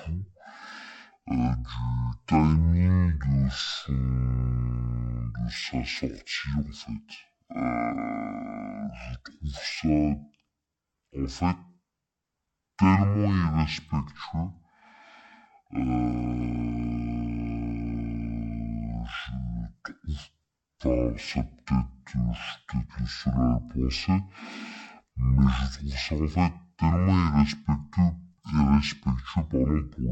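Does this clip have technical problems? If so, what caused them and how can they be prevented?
Yes. Throughout, the speech plays at half speed and a full octave low, 12 semitones down, with a faint mirrored copy in the upper spectrum. This is stereo read as mono: the alternating left and right samples were read in sequence as one channel. Prevent it by making the reader use the channel count declared in the file header.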